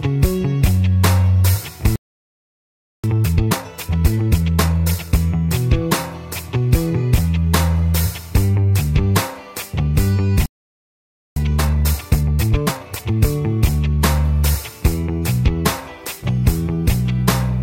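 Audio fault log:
1.96–3.04 s and 10.46–11.36 s, playback stall. The audio stops in mid-flow and goes fully silent. The first gap lasts about 1.08 s and the second about 0.90 s. The sound simply halts, then resumes. The likely cause is the player running out of buffered data, or its output thread being blocked, so nothing reached the output until it recovered.
3.04–5.20 s and 11.36–13.16 s, time-compressed catch-up. Right after each gap the audio runs at 1.5 times normal speed, for about 2.2 s and then 1.8 s. The pitch stays normal. The player is shrinking the backlog the stall built up. It cuts out short slices and cross-fades the joins until normal pace returns.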